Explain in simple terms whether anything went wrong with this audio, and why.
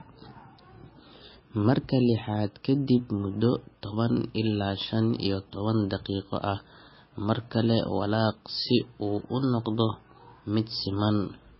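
The whole clip sounds dull and watery, with nothing above 5.6 kHz, likely from heavy MP3 compression squeezing the speech into very few bits.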